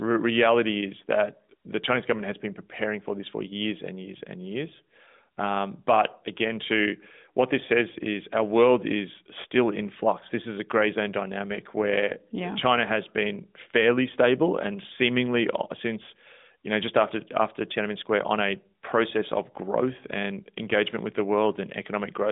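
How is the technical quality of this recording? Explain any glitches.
Nothing here stands out as a glitch, so there's really nothing to explain.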